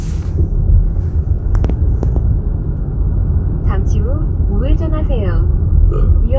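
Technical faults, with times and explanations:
Nothing stood out as a technical fault on listening to this audio.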